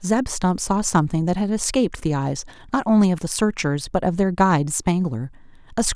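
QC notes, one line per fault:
Nothing to flag here, this speech comes through without a single fault worth noting.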